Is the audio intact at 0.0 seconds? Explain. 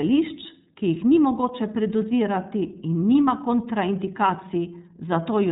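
No. At 0.0 s the speech is already passing through the iLBC codec, which affects the whole clip from start to end. Nothing above 3.8 kHz survives, and each short block is coded on its own, so the voice has a plainly audible rough, synthetic grain, consistent with 30 ms frames at 13.33 kbps. A simple low-pass filter would dull the sound without adding roughness, and packet loss would leave gaps rather than this steady texture.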